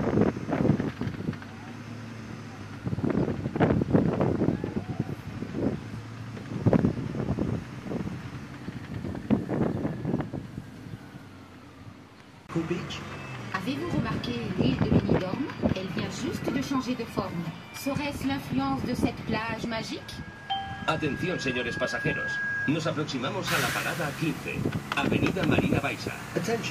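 There's loudspeaker feedback squeal from about 20.00 to 22.75 s: a mic is catching its own speaker, and around 1.6 kHz the loop gain tips past one, so that tone swells over roughly two seconds until it sits about as loud as the rest of the audio.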